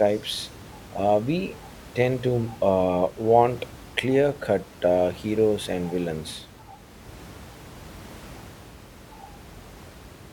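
Nothing in the signal chain of this speech recording is at fault; the only thing heard besides the talker is the room's own background noise, sitting about 21 dB below the speech, which belongs to the recording space rather than to the system.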